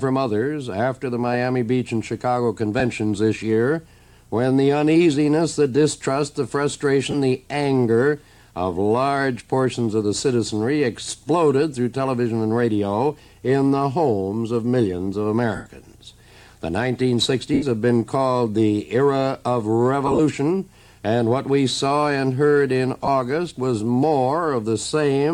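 Brief noisy smears replace the sound at 2.79 s, 7.11 to 7.14 s, 15.55 to 15.66 s, 17.54 to 17.63 s, 20.07 to 20.20 s (scattered, longest run around 40 ms) and 23.05 to 23.08 s. These are lost LE Audio frames: the LC3 decoder refilled each gap with the previous spectrum under random signs, fading longer gaps. Gap lengths fit 7.5 ms frames.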